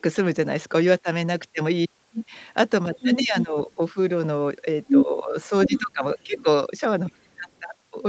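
From 2.95 to 3.75 s the other side's voice leaks through at about the talker's own level, likely because the echo canceller left some loudspeaker pickup on the mic. It returns from 4.85 to 5.05 s, even a bit louder than the talker, then fainter from 5.66 to 5.82 s, as a trace from 6.35 to 6.44 s and barely at all from 7.13 to 7.6 s.

While both sides overlap, the talker's speech is suppressed in double talk from 3.17 to 3.7 s, 5.05 to 6.45 s and 7.06 to 7.47 s. The canceller likely couldn't separate the talker from the echo and turned both down, so the talker dips by roughly 10 to 15 dB.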